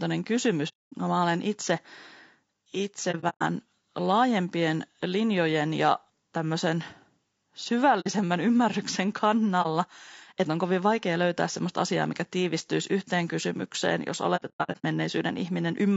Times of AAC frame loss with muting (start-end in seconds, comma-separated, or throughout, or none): 0.68-0.93, 3.11-3.42, 8.00-8.07, 9.62-9.66, 14.36-14.85